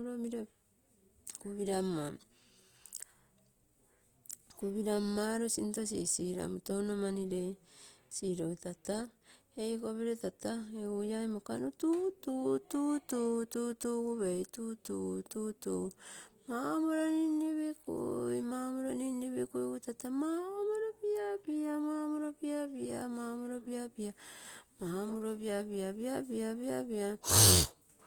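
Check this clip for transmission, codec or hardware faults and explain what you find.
One codec fault runs through the whole recording: throughout, the speech has plainly audible Opus compression, likely from music-mode coding, which fits a bitrate around 24 kbps. Starved bands are filled with folded or noise content, so sounds turn grainy and rough rather than swirly with spectral holes as MP3 would. Bandwidth stays full, extending to about 20.1 kHz.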